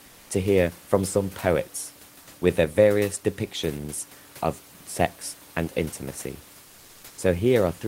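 From 0.05 to 0.29 s, comfort noise replaces the background for about 240 ms: the room noise, roughly 27 dB below the speech, gives way to a steady, featureless hiss about 2 dB quieter, likely from Opus discontinuous transmission. A spectrogram shows a smooth, uniform noise band without the room's fine texture.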